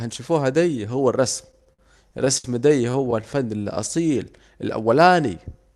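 A speech clip with repeated stalls (stutter) in two places. From 1.47 to 2.45 s, just after "دي هو الرسم", the sound hitches nine times. The receiver stretches the last sound to cover about 187 ms, with the longest gap 67 ms. From 2.90 to 3.24 s, six brief hitches follow, none over 16 ms. Nothing is lost. Late packets kept draining the jitter buffer, so the speech drags. The call codec's top end stops near 12 kHz.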